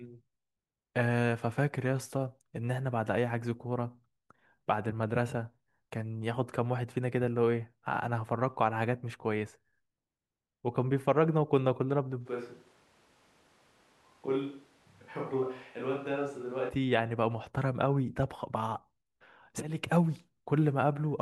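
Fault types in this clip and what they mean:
Switch to a distant microphone: from 12.27 to 16.68 s the speech abruptly turns roomy and hollow, with thinner bass, a drop of about 5 dB and room noise roughly 30 dB down. The likely cause is a lost close mic, leaving a farther one.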